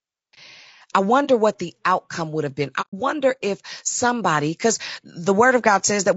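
The speech sounds rough and grainy from start to finish, with noise filling the gaps between harmonics and a thin, somewhat synthetic top end. This is plainly audible damage, likely from low-delay AAC compression at a low bitrate near 32 kbps. Its short frames resolve pitch poorly, so the grain follows the voice rather than sitting underneath it like steady hiss.

At 1.25 s, just before "what the outcome would", the sound briefly fades out and back in over about 40 ms. This fits a single AAC frame lost with muting, where the decoder zeroes the missing spectrum. At 2.81 to 2.94 s, between "outcome would have been" and "if somebody because", a longer hole of about 120 ms points to roughly four lost frames. Both holes have soft edges, unlike a hard dropout.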